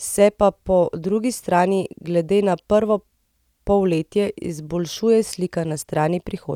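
Nothing in the speech signal points to a technical fault at any moment.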